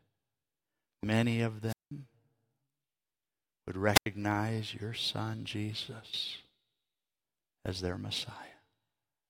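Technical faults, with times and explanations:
1.67–1.91 s and 3.94–4.06 s, wireless microphone squelch dropout: the first time just after "many of", the radio link from the FM microphone fades. Hiss rises briefly before the receiver's squelch mutes the output, leaving a hole of about 187 ms, then about 88 ms, before the sound returns.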